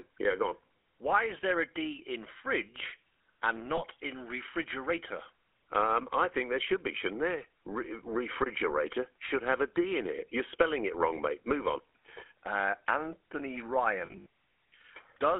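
A buzzy, gravelly roughness sits on the speech from start to finish, with the sound squeezed into a narrow telephone band of roughly 300 Hz to 3.4 kHz. This is the GSM full-rate codec. It rebuilds the voice from a vocal-tract model driven by sparse, regularly spaced pulses, and that coarse excitation produces the grain. The damage is plainly audible, and the sound points to the original 13 kbps full-rate coder.

At 3.76 s a short metallic ring replaces the speech for about 20 ms. This is a lost GSM frame. The decoder had no good data, so it reused the settings of the previous frame, which holds a rough, ringing copy of the last sound. The dropout fits a single 20 ms frame.

From 14.06 to 14.26 s the same ringing returns in a broken stretch. Frame losses are scattered across that span and add up to about 140 ms, which fits roughly seven lost frames. The longest unbroken gap is around 70 ms. 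Each gap is filled by the last good frame repeated, so the sound stutters and rasps until good frames resume.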